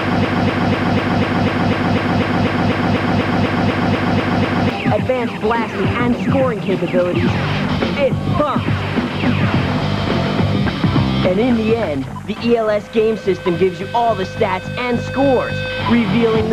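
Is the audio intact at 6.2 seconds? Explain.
Yes, the audio at 6.2 seconds is intact, with no dropout, click, distortion or other fault at that moment.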